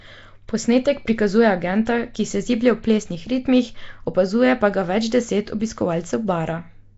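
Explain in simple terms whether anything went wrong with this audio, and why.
The speech was likely squeezed through Nellymoser compression, the old Flash microphone codec, which spends very few bits and fills weak parts with noise. From start to finish it sounds rough, hissy and smeared, underwater, with nothing above about 7.7 kHz.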